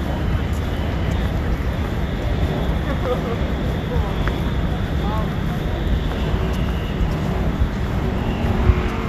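No technical faults are audible.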